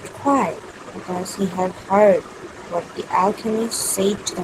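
Nothing in this speech recording calls for comment: there's no point along the way where anything technical trips up or draws the ear.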